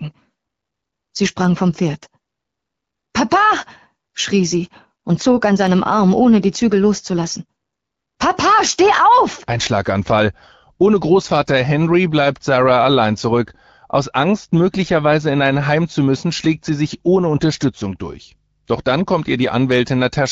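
Nothing goes wrong anywhere in this speech recording; it just carries the usual character of AMR wideband (HD Voice) coding at 12.65 kbit/s, where the band above 6.4 kHz is filled in with shaped noise.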